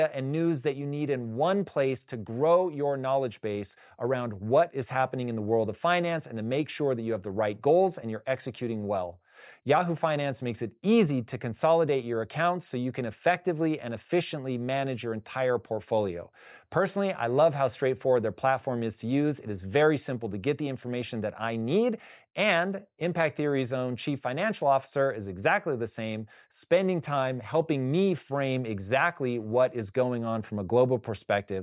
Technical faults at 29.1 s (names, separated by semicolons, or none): none